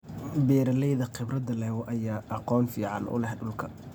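No technical faults are audible.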